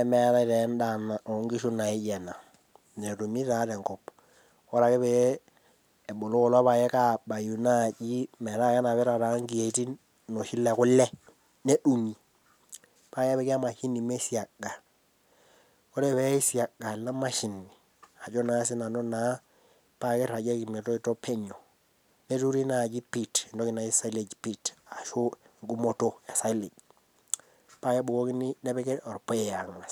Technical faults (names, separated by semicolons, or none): none